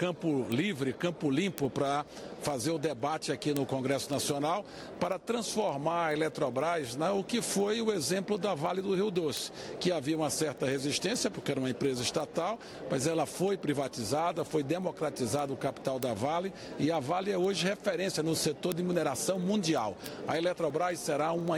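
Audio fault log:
0.17–21.55 s, word clock ticks: there's a run of sharp ticks going the whole way through, roughly every 70 ms, a few hundred in all. That steady rate is the giveaway. The receiving end is running on its own clock instead of locking to the source, with the two drifting apart by something like 300 ppm. Each time they slip past each other, a single sample gets dropped or doubled, and that tiny discontinuity is what you hear as each tick.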